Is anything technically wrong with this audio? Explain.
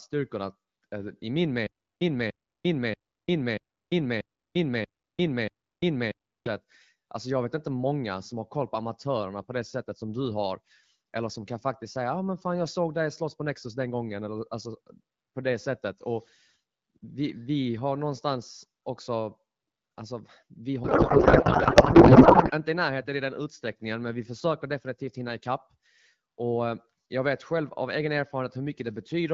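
Yes, there are two faults.

From 1.67 to 6.47 s, right after "eh i min", there is a stutter with silent gaps. A fragment of about 293 ms plays, then about 342 ms of digital silence follows, and the cycle repeats every 635 ms, seven times in all. The likely cause is a stalled player or stream that replays its last buffered fragment at each retry and then runs dry. The audio for that span is lost. A dropout would leave only silence, and this differs because the identical fragment keeps returning on an even beat.

From 20.84 to 22.51 s, just after "alltså vi", the speech gives way to garbled noise and warble that barely tracks it. This is a codec payload misread. The frames were packed in octet-aligned AMR format but read as bandwidth-efficient, so the decoder pulls every field from the wrong bit positions while the frames still look valid. Packet loss would leave gaps or smeared concealment, and this differs because the noise is continuous and barely follows the speech, and it lasts until the framing realigns.

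The light, band-limited colouring heard throughout fits AMR wideband (HD Voice) at around 12.65 kbit/s.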